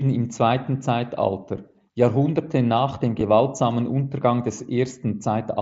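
At 1.57 s and again at 3.2 s there is a barely noticeable smear in the speech, a brief moment where the sound seems repeated rather than interrupted. Both are concealed Bluetooth headset packet loss: a gap of about 7.5 ms, which points to a single lost packet each time, was filled by continuing the waveform from a closely matching piece of the preceding audio. Because each gap is so short, the patch is nearly hidden. Both instances sit on the wideband mSBC headset link.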